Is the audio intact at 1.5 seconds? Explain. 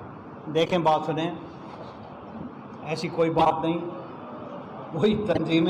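Yes, the audio is intact at 1.5 seconds, with no dropout, click, distortion or other fault at that moment.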